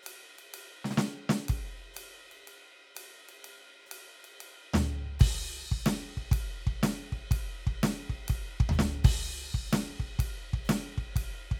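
No technical faults are audible.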